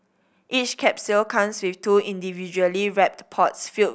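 No technical faults detected.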